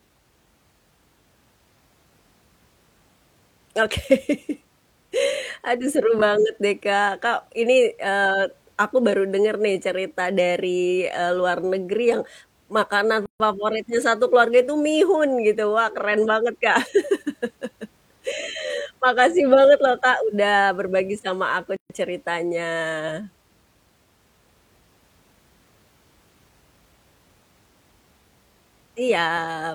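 Two gaps at a join of encoded pieces: silences of 142 ms at 13.26 s, before "favoritnya satu keluarga itu", and 134 ms at 21.76 s, after "berbagi sama aku". Encoder start delay and last-frame padding were left untrimmed, so the speech drops out and resumes where it stopped.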